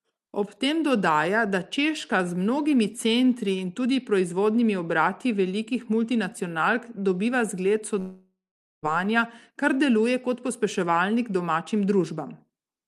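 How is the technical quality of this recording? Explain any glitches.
One clear break disrupts the speech, heard through the band limit of a call codec whose top end stops around 12 kHz.

Long network dropout, from 7.99 to 8.86 s: about 0.84 s of sound is missing, likely because packets stopped arriving. The receiver stretches the last sound into a fading buzz, then leaves near-silence for roughly half a second before the speech resumes with that stretch gone. A short packet-loss glitch would be a brief warble; here the fade and gap last nearly a second.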